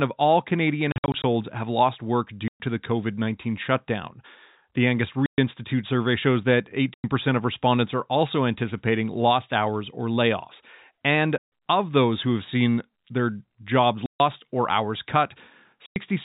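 Packet loss filled with silence cuts holes into this telephone-band speech, at 0.92–1.24, 2.48, 5.26, 6.94, 11.38, 14.06 and 15.86 s, with hard-edged gaps in multiples that fit 20 ms packets.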